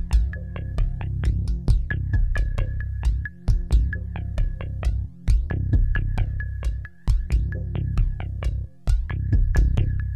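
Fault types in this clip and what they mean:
No technical faults detected.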